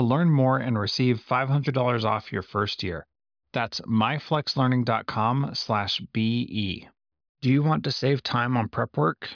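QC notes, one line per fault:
No faults heard in this recording.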